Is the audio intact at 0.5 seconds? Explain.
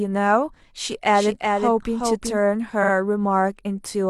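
Yes, at 0.5 seconds the speech runs through cleanly, with no dropout, click, distortion or other fault to be heard at that point.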